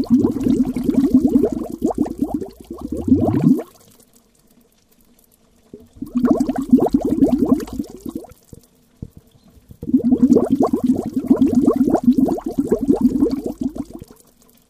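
No technical faults are audible anywhere in this recording of sounds.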